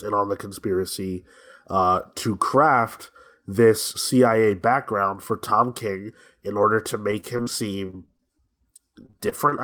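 Near the end of the speech, repeated packet loss (robotic sound) strikes three times: 7.11–7.48 s, 7.86–8.50 s and 9.06–9.53 s. Several short holes, none longer than about 40 ms, are patched by extending the previous sound, giving choppy stutters with pieces missing rather than one clean dropout.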